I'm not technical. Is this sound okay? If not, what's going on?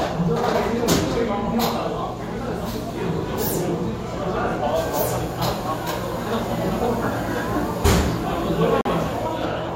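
No. Near the end of this sound, from 8.81 to 8.90 s, it briefly goes completely silent. That is a digital broadcast dropout: the receiver got a damaged chunk of signal, muted it, and resumed once good data returned. The missing sound is simply gone, about one frame's worth. A weak analogue radio signal fades into hiss or crackle, but this gap is clean silence, and the sound resumes further along rather than where it stopped.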